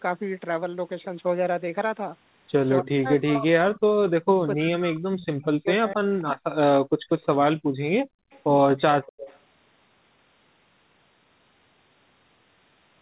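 From 2.79 to 6.13 s the speech is pulled down in pieces, at worst by around 40 dB, for about three seconds. This is speech suppressed in double talk: the echo canceller likely mistook both sides talking for echo.

Echo leak appears at 6.18–6.23, 7.19–7.37, 8.31–8.40 and 9.03–9.39 s. A faint copy of the voice arrives 250 ms late, roughly 20 to 35 dB below the speech, likely because the far-end canceller let loudspeaker pickup through. The fixed lag separates it from room reverberation.

At 6.84–7.09, 7.58–7.80 and 8.04–8.30 s the background drops by about 35 dB for a fraction of a second, then returns. This is background gated by the echo canceller. It differs from double-talk suppression because it is the room noise that vanishes.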